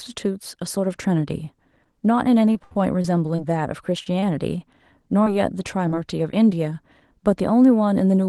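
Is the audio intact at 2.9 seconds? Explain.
No. From 2.53 to 3.40 s there is repeated packet loss, with six short gaps (longest 68 ms) patched by extending the preceding sound. About a fifth of that stretch is concealed this way, giving choppy, robotic speech with fragments missing.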